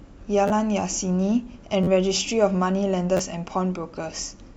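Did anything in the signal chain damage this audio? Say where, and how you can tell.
Yes. Repeated buffer at 0.48–0.50 s, 1.83–1.87 s and 3.17–3.19 s, at the driver or buffer stage. Each is a tiny stutter: a slice of about 11.6 ms, which fits a 512-sample buffer, replays two or three times with hard joins, as new audio arrived late, dropping about 20 to 40 ms of speech.

Corrupt frame decoded at 3.95 s, in the codec. A brief glitch peaking around -40 dBFS, lasting about one codec frame, appears where a frame with flipped bits was decoded anyway, its misread gains and codes putting energy at the wrong frequencies.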